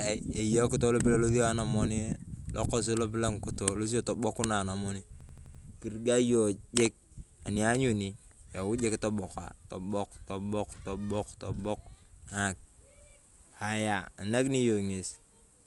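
Dolby Digital compression, likely, runs throughout: a low bitrate near 64 kbps leaves the speech dull, with nothing above 11.4 kHz and rough, fluttering noise around tones. A system hang loop follows from 5.21 to 5.63 s: the driver froze while the hardware kept replaying one 85.33 ms block, which fits a 4096-sample buffer. It repeats five times as an 11.7 Hz machine-gun stutter, with essentially no audio lost.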